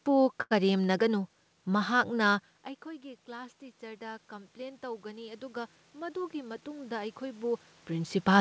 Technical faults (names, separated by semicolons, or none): short stall from a late packet; automatic gain rising; jitter buffer speed-up